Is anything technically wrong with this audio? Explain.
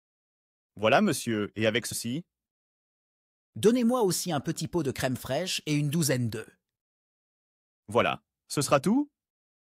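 Yes. Compressed frames skipped at 1.91 s: about two 24 ms frames never decode, so the audio jumps ahead roughly 50 ms, leaving an abrupt join where the missing audio should be.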